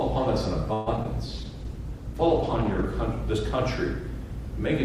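At 0.73 s the audio stretches into a fading buzz or hiss for about 0.15 s, then resumes where it left off. This is a call audio freeze, likely from packets held up until the jitter buffer ran dry, adding about 130 ms of delay but losing nothing. Brief smears follow at 0.96 s and 1.03 s, each short concealed packet loss covering about 20 ms that never arrived and was patched from the preceding sound. From 1.31 s to 2.93 s the sound turns rough and muffled, a call bitrate drop from 48 to 13 kbps that forces the encoder into coarser coding with reduced high frequencies.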